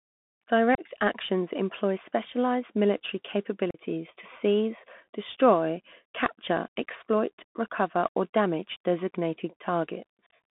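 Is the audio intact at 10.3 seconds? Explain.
No. From 10.26 to 10.33 s, unconcealed Bluetooth headset packet loss drops about 52 ms of audio in scattered gaps, the longest about 38 ms, leaving short holes with abrupt edges. Underneath, the Bluetooth CVSD headset codec's one-bit adaptive coding confines the sound to roughly 150 Hz–3.5 kHz, adding plainly audible granular hiss and scratchy distortion.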